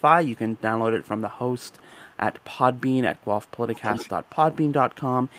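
An echo leak repeats the speech 311 ms late: faintly at 0–0.61 s, 1.04–1.94 s, 2.40–2.44 s and 2.75–2.81 s, then far louder, only about 10 dB down, at 3.17–5.33 s. This is likely a loudspeaker side's canceller letting pickup through. Spectrograms show harmonic traces duplicated 311 ms later.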